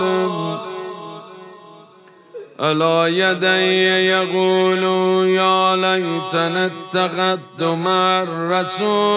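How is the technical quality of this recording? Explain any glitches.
No glitches can be heard anywhere in the recording. Nothing interrupts or disturbs the sound at any point.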